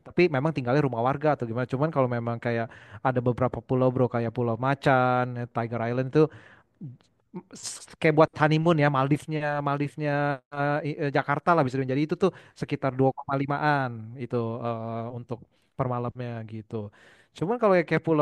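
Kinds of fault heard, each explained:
No kinds of fault are heard in this clip.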